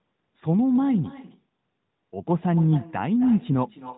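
Throughout, an echo with no canceller repeats the speech roughly 300 ms later at about 18 dB down, showing on a spectrogram as faint duplicate harmonics trailing each syllable.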